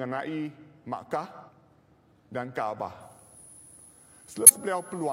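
The audio has three compressed frames skipped: at 1.44 s, 3.30 s and 4.46 s the sound jumps ahead by roughly 150, 200 and 150 ms, which fits whole frames of about 46 ms going missing or being rejected by the decoder. From 3.02 s to the end there's also a switching supply whistle, a thin high tone drifting between 10.0 and 10.2 kHz, sitting somewhere around 20 dB under the signal.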